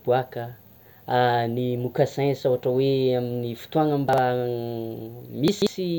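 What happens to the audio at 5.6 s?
Around 5.48 to 5.67 s the speech briefly jumbles: chunks out of order. One chunk of about 46 ms plays three chunks late, leaving hard joins. Unlike a dropout, no audio is missing; the same material is simply heard in the wrong sequence.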